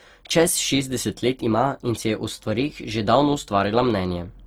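Speech sounds rough, grainy and noisy throughout despite full bandwidth up to 20.2 kHz, likely from Opus compression in music mode, at a low bitrate near 24 kbps.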